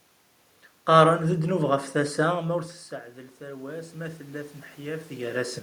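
From 3.38 s to 5.58 s, automatic gain rising: the input dropped by about 17 dB, so the gain control slowly raised its gain by about 7 dB. The speech and the room noise swell together over those two seconds.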